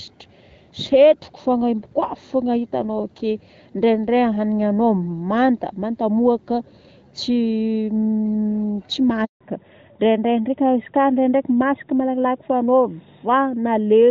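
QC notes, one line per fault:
9.25 to 9.41 s, handover gap: the speech stops abruptly and a hard silence of 160 ms follows before sound resumes, so whatever was said in that span is gone, not muffled. The cause is a network handover, where the call was passed from one link to another and no speech frames reached the receiver while the switch completed. The fade is only a few tens of milliseconds.
9.41 s to end, fallback to narrowband: straight after the gap the speech turns duller, boxier and rougher, with nothing at all above 4 kHz, losing the sibilance and air that the earlier HD Voice section carried. The call dropped from the wideband AMR-WB codec, whose light coding up to this point suggests a rate around 12.65 kbit/s, to an older narrowband codec, likely AMR-NB at 12.2 kbit/s. That codec cannot code anything above 4 kHz.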